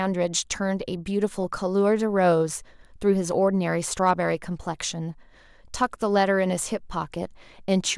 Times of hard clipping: 4.07-4.11, 5.83

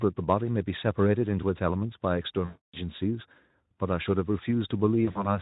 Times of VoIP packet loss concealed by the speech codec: 2.46-2.77, 5.05-5.38

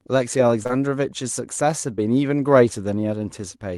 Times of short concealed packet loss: 0.63-0.71, 1.95-2.02

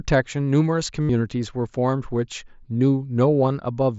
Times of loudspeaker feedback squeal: none

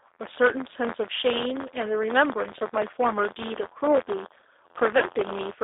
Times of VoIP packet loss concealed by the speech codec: 4.98-5.07

